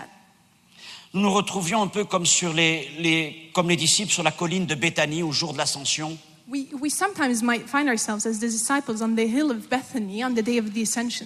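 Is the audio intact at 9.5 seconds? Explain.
Yes, at 9.5 seconds the audio is intact, with no dropout, click, distortion or other fault at that moment.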